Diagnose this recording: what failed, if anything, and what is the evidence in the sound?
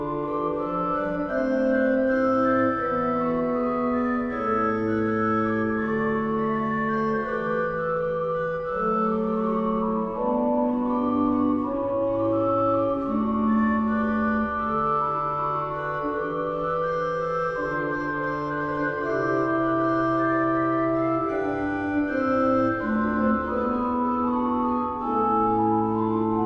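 Nothing stood out on listening, so there is no failure here to diagnose.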